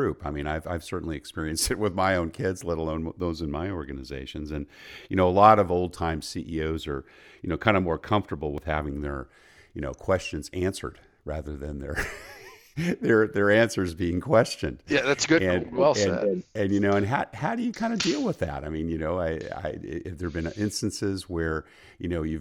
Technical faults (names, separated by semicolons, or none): dropped buffer (overrun)